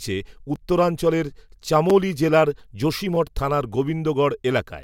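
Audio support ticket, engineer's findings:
Repeated buffer at 0.55, 1.90 and 3.15 s, playback underrun. Short clicks in the speech where a ~5.8 ms chunk replays (256-sample buffer, likely). Third one repeats twice, so a bit buzzier.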